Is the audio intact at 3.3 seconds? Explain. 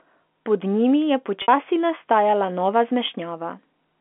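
Yes, at 3.3 seconds the speech runs intact, carried through the narrow telephone band with nothing breaking into it at that moment.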